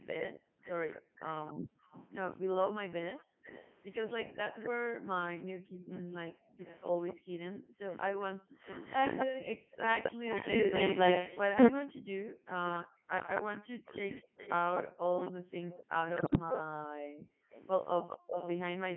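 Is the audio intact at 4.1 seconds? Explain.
No. At 4.1 s the speech is passing through a Codec 2 vocoder, which runs for the whole clip. The decoder rebuilds the voice from sine waves using only pitch, voicing, energy and a coarse spectral envelope, so the original waveform is gone. At this point the speech sounds robotic and buzzy, with heavy codec damage and a narrow line band from 150 Hz to 3.4 kHz. It runs at the top 3.2 kbit/s mode.

The moment also falls within the stretch from 0.0 to 9.72 s where the background is gated by the echo canceller. While the far-end loudspeaker is active, the canceller pulls the microphone down hard, by up to about 40 dB. The room sound dips or vanishes and then returns when the canceller releases. Across this stretch these dropouts add up to roughly two seconds.

An echo leak is also present from 0.19 to 18.59 s, covering 4.1 s. A delayed copy of the speech arrives 262 ms behind the original, roughly 10 dB below it. 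This points to a loudspeaker at the other end whose echo canceller failed to remove everything its microphone captured. The leftover was sent back down the line, most likely through that path, and is heard as a trailing double of the voice.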